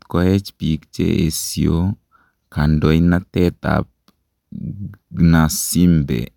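No technical faults can be heard anywhere in the recording; the signal holds steady and continuous from its first moment to its last.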